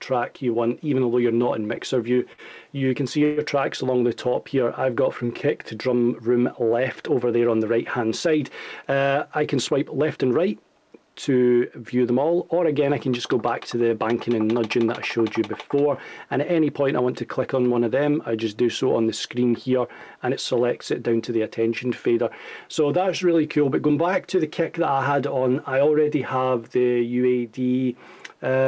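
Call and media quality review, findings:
Repeated stalls (stutter), 1.76 to 3.39 s. Five short holds, longest 127 ms, about 230 ms filled. Jitter buffer ran dry from late packets; last sound extended. Nothing lost, drags.

Jitter buffer speed-up, 9.10 to 10.32 s and 16.99 to 17.65 s. Sound runs 8% fast, same pitch, hurried. Buffer overfull; pitch-period slices cut, roughly 0.1 s and 70 ms total.

Band ends at 8 kHz, which fits G.722 on the call path.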